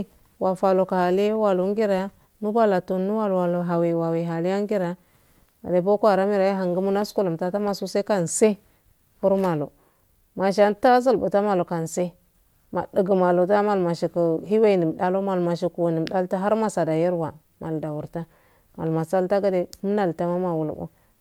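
Speech recording with no audible technical faults.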